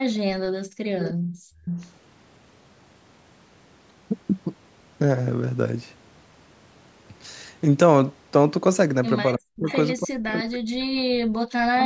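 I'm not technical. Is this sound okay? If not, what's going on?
No. Three problems come from the echo control that a call uses.

Background gated by the echo canceller: from 0.47 to 0.94 s and again from 1.14 to 1.65 s, the room sound drops out almost completely, then comes back. The echo canceller shut the microphone down hard while the loudspeaker was playing.

Echo leak: faint repeats of the speech trail the original by about 0.3 seconds, at 0.99 to 1.14 s, 1.65 to 1.93 s, 9.57 to 9.76 s and 11.79 to 11.85 s. Part of the loudspeaker sound likely slipped past the echo canceller and was sent back.

Speech suppressed in double talk: from 9.36 to 9.69 s and from 9.97 to 11.73 s, the voice sinks sharply or breaks into pieces. Both sides were likely talking at once, so the canceller turned everything down together.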